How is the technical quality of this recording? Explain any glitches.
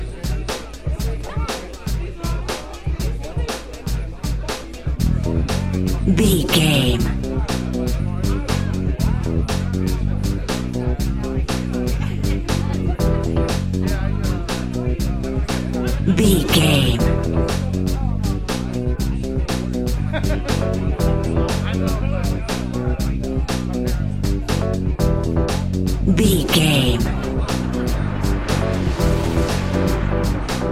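Nothing in the recording glitches or drops out; it just runs along without any technical trouble worth pointing to.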